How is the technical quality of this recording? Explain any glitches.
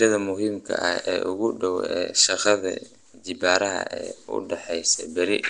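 The technical quality is poor, with codec damage that is plainly audible from start to finish. Throughout the speech there is a rough, hissy halo around the voice and a smeared, underwater quality. This is likely Nellymoser compression, the old Flash microphone codec, at a rate that fits roughly 44 kbps. It spends a fixed two bits per sample on blocks of 256 samples. Bands judged too weak get no bits and are refilled with noise, which makes the hiss. A spectrogram would show a hard ceiling at 10.6 kHz, grainy noise patches filling gaps between harmonics, and blurred, blocky onsets.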